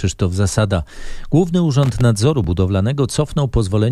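A short irregular burst of crackle and scratching cuts into the speech from about 1.83 s to 2.01 s, lasting under a fifth of a second. It is loose connector crackle: a worn or dirty contact making and breaking as it shifts, chopping the signal into rough fragments.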